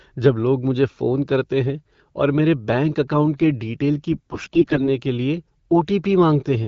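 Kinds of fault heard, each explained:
AMR bit errors: flipped bits in each frame's less protected data, roughly one in ten, misplace excitation pulses and skew fine pitch and gain values; from 4.12 to 4.89 s, before "के लिए", speech turns gargly but keeps pitch and level, unlike frame loss, which leaves gaps.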